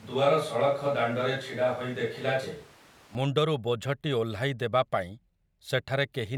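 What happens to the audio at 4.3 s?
Nothing goes wrong at 4.3 s: the speech carries straight through that moment with no dropout, click, glitch or other fault.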